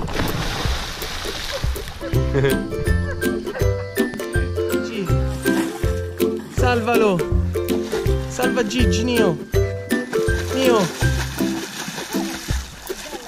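At 4.14 s a single loud pop cuts through, a sharp transient lasting until about 4.17 s and standing roughly 10 dB above the surrounding sound, which continues uninterrupted beneath it. This is likely a sudden voltage step or pulse entering the signal chain, from something like a plug being seated, a switch, a static discharge or a driver glitch, with the downstream circuitry shaping that pulse into the brief pop heard here.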